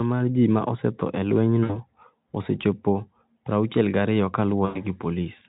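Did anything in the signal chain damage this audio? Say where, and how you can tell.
Yes, at the network stage. VoIP packet loss concealed by the speech codec hits 1.64 to 1.79 s and 4.66 to 4.82 s. The speech smears into a buzzy tone or coloured noise that fades. The decoder stretches its last pitch across gaps of 60 and 100 ms.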